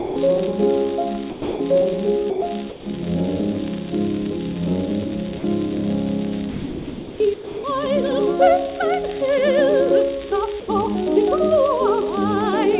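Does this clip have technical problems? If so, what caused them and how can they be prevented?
Yes. The sender's voice detector likely misjudged parts of the sound as background and stopped transmitting, so the receiver filled the gaps with comfort noise: sound dropped by the voice detector. The audio gives way to flat, steady noise at 0.00–0.16, 1.30–1.60, 2.30–2.42, 2.70–2.86, 5.38–5.44, 6.50–7.20, 7.34–7.64 and 10.60–10.68 s, each lasting 60 to 700 ms, before the detector triggers again. The band-limited sound, with nothing above 4 kHz, fits a narrowband call codec. Lowering the detector's sensitivity threshold, adding hangover time, or disabling discontinuous transmission would prevent these dropouts.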